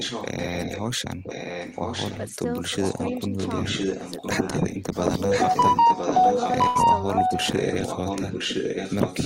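From the start to 0.84 s, and again at 1.23–2.36 s, 2.81–3.2 s, 3.37–4.83 s and 5.17 s to the end, a delayed copy of the speech trails the talker by about 1 s. This is an echo leak, likely a loudspeaker's echo canceller letting the far-end pickup through. The copy starts faint and grows until it is about as loud as the speech in the final stretch. On a spectrogram it shows as a ghost of the speech harmonics shifted about a second later.

At 2.3–2.36 s and 2.65–3.01 s the speech is suppressed in double talk, likely because the canceller ducked everything while both sides overlapped. The waveform envelope dips by about 5 dB, then by about 10 dB.

At 6.67–6.77 s a burst of packet loss cuts out about 80 ms of audio. The receiver fills the gap with a held, fading continuation of the last sound. A spectrogram shows flat, smeared bands decaying until normal detail resumes.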